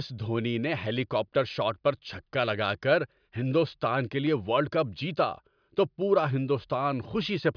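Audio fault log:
No faults can be heard in this speech clip. There is nothing to log.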